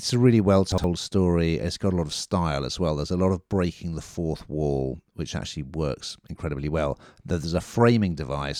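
At 0.72 to 0.84 s, just after "a really well", the speech has chunks out of order. A 60 ms block of audio was delivered or written one chunk late, so it plays after the block that should follow it. The two pieces swap places across 120 ms. No audio is missing, but the sequence is scrambled and three abrupt joins appear, heard as a brief jumbled stutter.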